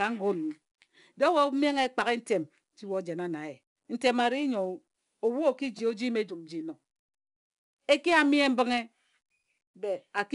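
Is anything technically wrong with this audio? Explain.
Yes. Throughout, a gritty hiss rides every loud syllable, with nothing above 10.7 kHz. That is 4-bit ADPCM compression, where coarse adaptive steps leave noise that tracks the speech level.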